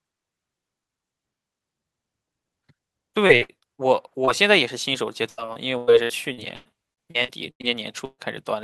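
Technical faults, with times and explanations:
3.27–3.82 s, repeated packet loss (robotic sound): five gaps, longest 60 ms, each patched by extending the last sound, so speech turns choppy and robotic.
4.25–4.29 s, short concealed packet loss: about 20 ms failed to arrive in time; the receiver stretched the preceding sound, leaving a brief smear.
5.29–7.65 s, repeated packet loss (robotic sound): eleven gaps up to 100 ms each, about a quarter of the stretch concealed, giving robotic, broken-up speech.
8.05–8.20 s, burst of packet loss: about 140 ms lost in a row; the last sound was continued and faded, then about 40 ms of silence before speech resumes further on.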